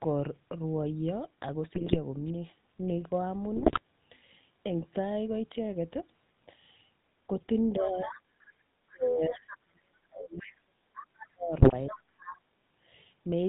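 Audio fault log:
Throughout: GSM full-rate codec. The speech has that gravelly, buzzy grain, because the coder rebuilds the voice from a vocal-tract filter fed by a sparse, regularly spaced pulse train. Nothing comes through above 4 kHz, so the top end sounds dull.
1.74–1.97 s, 3.56–3.80 s, 11.58–11.73 s: GSM bit errors. Each burst breaks into squawks and gargling for a quarter second or less. Flipped bits corrupt the filter, pitch and gain values, so each damaged frame decodes with a warped spectrum or a sudden level jump.
7.76–8.19 s, 8.9–10.78 s, 11.32–12.26 s: speech suppressed in double talk. The talker dips or cuts out in pieces, by about 20 dB in the first stretch and down to about 40 dB in the longest. The likely cause is an echo canceller that couldn't separate talker from echo and pulled both down.
7.79–8.21 s, 9.49–9.58 s, 10.4–11.27 s, 11.89–12.39 s: other side's voice leaking through. 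A second voice sits underneath the talker at about 10 to 15 dB below. It's likely loudspeaker pickup that the echo canceller didn't fully remove, and it lines up with the suppression dips.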